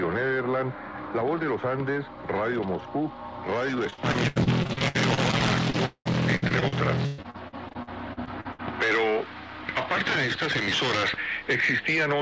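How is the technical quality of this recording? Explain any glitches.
The main problem here is a run of repeated packet loss (robotic sound) in the middle of the clip. The audio also has the top end cut off above about 8 kHz, which fits a wideband call codec like G.722 in a WebRTC call path.

From about 3.9 s to 8.6 s, packets keep going missing, around thirty times in under five seconds. Each hole gets patched by stretching the last bit of sound forward, and then the next hole arrives almost immediately. About a quarter of that stretch is filled-in material, with the longest gap near 0.2 s. You hear choppy, robotic audio with chunks dropping out.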